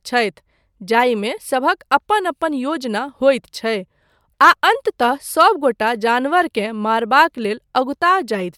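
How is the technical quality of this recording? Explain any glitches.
The technical quality of this recording is sound, with no glitches to explain.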